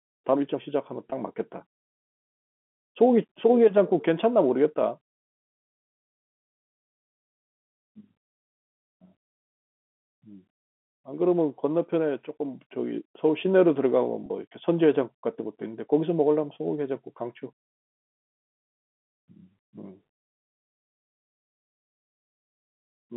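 Packet loss with pitch repetition at 1.10 s and 14.26 s: 20 ms and 40 ms gaps are bridged by repeating the last pitch period, briefly sounding held and buzzy.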